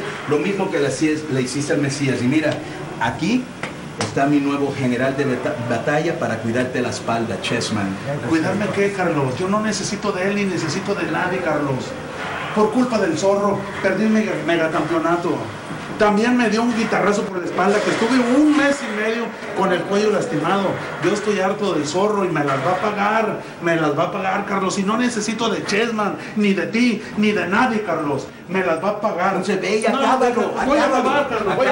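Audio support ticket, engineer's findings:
No faults found.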